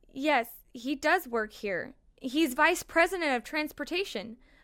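No technical faults can be heard anywhere in the speech recording.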